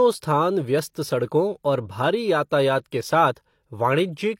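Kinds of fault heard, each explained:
pre-echo: the codec spreads quantisation noise across a whole transform block, so a sharp attack late in the block drags that noise into the quiet before it. Here a short hiss smears the speech onsets at 0.93 s and 2.91 s, lasting 19 ms and 12 ms.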